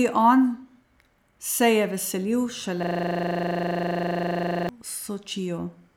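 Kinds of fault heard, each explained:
System hang loop: right after "se je veselil", one 40 ms slice of speech repeats exactly, forming a 25 Hz buzz; unlike a stutter, nothing new arrives until playback resumes.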